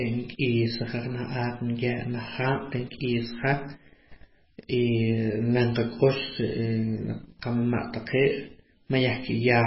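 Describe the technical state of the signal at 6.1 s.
At 6.1 s the speech carries MP3 compression damage that runs through the whole clip, likely from an encoder starved of bits, which fits a bitrate near 16 kbps. Nothing survives above 5.5 kHz, and weak frequency lines flicker between frames, giving a heavy watery, swirling texture with smeared consonant attacks.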